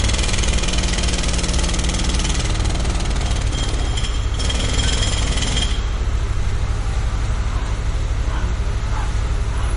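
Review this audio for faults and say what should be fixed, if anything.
Throughout the clip the sound is watery and swirly, with nothing above 10.5 kHz, which is likely MP3 compression at a low bitrate, around 39 kbps: the encoder ran short of bits, cut the treble and let weak frequency lines flicker between frames. Encode from the original at a higher bitrate, or keep a lossless copy.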